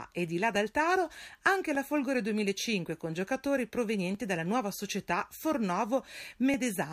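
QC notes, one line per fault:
0.56–6.54 s, clock drift buffer slips: A click sounds about every 1.2 s across this span, roughly seven in all. The spacing stays steady. The likely cause is two devices on separate clocks that disagree by a few hundred parts per million. The buffer between them slowly fills or drains. When it runs out of room, a few dozen samples are dropped or repeated at once. That sudden break in the waveform is the click.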